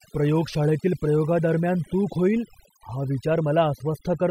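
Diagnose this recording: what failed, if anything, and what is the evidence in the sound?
Across the whole speech clip the background drops and breaks up into twinkling specks. This is overdone noise removal at the processing stage: a noise reducer set too hard is switching off frequency bands near its noise estimate, taking quiet voice detail with them.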